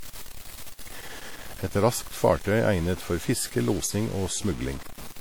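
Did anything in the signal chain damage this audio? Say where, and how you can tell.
Yes. At the sample-format conversion stage, quiet passages throughout turn gritty rather than hissy, with distortion only about 15 dB below the signal. The grit tracks the signal instead of sitting as steady hiss, which points to likely low bit depth without dither, around 6 bits, truncated.

At the codec stage, a second, different damage runs throughout: ringing, washy smearing spread over tens of milliseconds, with hiss that breathes with the speech. Unlike the sample-locked grit, this fits WMA compression at a low bitrate near 48 kbps, plainly audible.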